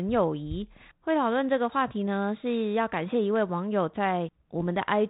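Bit errors on an ADPCM link hit this speech clip from 4.58 to 4.65 s, a short pop and rough burst. A fraction of a percent of flipped bits upsets the decoder's step size and predictor, so each error rings on briefly across the narrowband 32 kbit/s G.726 path.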